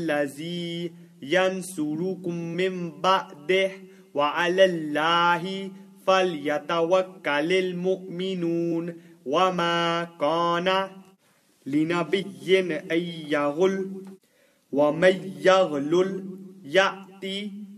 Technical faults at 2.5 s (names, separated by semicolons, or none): compressed frames skipped